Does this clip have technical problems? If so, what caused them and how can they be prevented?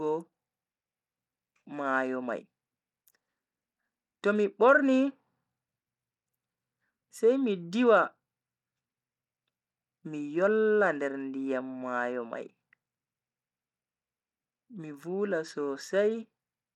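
Yes. Throughout the speech there is plainly audible codec damage consistent with Bluetooth SBC compression, the likely cause being an SBC link running at a bitrate that fits about 96 kbps. SBC divides the signal into a few wide sub-bands and shares a small bit pool among them without a proper hearing model, so the weaker upper bands are starved and the rest coarsely quantised, leaving dulled, unstable treble with gritty noise and aliasing. To prevent it, record over a wired connection or use a higher-quality Bluetooth codec or larger bit pool.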